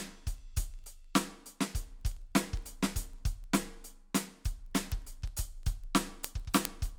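Word clock ticks run from 0.13 to 6.96 s: an unlocked receiving clock, drifting roughly 400 ppm, slips a sample about every 50 ms, giving steady sharp ticks of uneven strength through the music.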